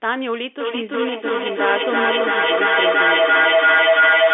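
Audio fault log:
0.6–4.34 s, feedback echo between two devices: a nearby device replays the speech into the mic, so it loops back about every 0.3 seconds and piles up to about 5 dB over the original.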